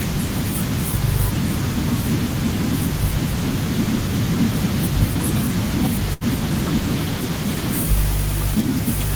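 Speech with a burst of packet loss at 6.13 to 6.24 s: about 72 ms of concealment stretches the last sound into a fading buzz or hiss, then about 60 ms of audio is skipped. A spectrogram shows a smeared, repeated spectrum decaying before an abrupt resumption.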